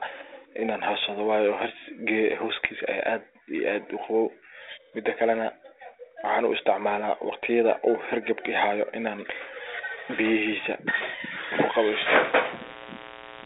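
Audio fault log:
11.96 to 13.46 s, mains buzz: a switching spike from a dimmer, rectifier or poorly shielded cable leaks into the line twice per 60 Hz cycle, so a spiky 120 Hz pulse train lands under the speech at roughly 15 dB below it. Its harmonics stack up into a raspy, steady buzz that runs to the end of the clip, capped near 3.8 kHz by the narrowband 32 kbit/s G.726 path it rides through.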